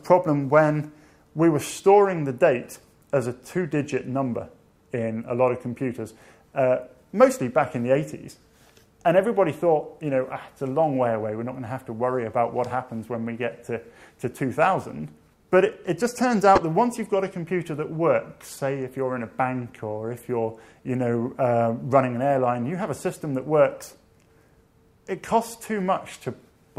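At 3.98 s, 16.55 to 16.60 s and 23.13 to 23.16 s, a corrupt frame decoded: damaged bits in the compressed stream were played as if valid, so misread gains put energy at the wrong frequencies. Each is a brief chirp or blip. The first and last are quiet, near -25 dBFS; the middle one, spanning a few frames, is a loud burst near -5 dBFS. A spectrogram shows short, sharply bounded smears; a waveform shows a spiky blip.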